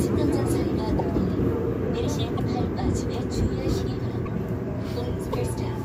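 At 0.98–1.01, 2.37–2.40, 4.25–4.28 and 5.32–5.35 s, the sound skips forward with a roughly 30 ms glitch, likely a broken MP3 bit reservoir: frames decode against wrong borrowed data. On a spectrogram each shows as a narrow vertical smear; the waveform breaks abruptly.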